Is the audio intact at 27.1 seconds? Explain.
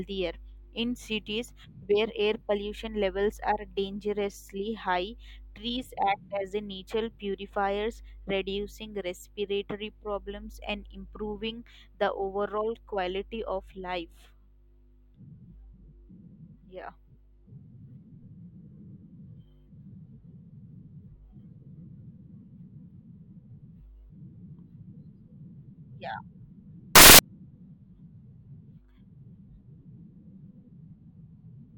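No. From 26.95 to 27.19 s the samples are built from the wrong bytes. Low bits become the large part, so the speech turns into loud, harsh broadband noise.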